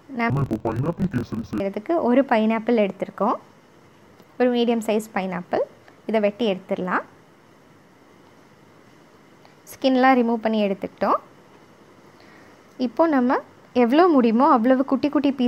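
From 0.3 to 1.62 s the sound drops an octave and turns doubled and choppy, the signature of interleaved audio read as planar: alternating left-right samples are split so each half-block plays as one channel at half speed. Blocks of about 23.22 ms, which fits a 1024-sample block, leave a chop near 43.1 Hz. Unlike a sample-rate mismatch, which also lowers pitch, the overall pace stays correct and nothing lengthens.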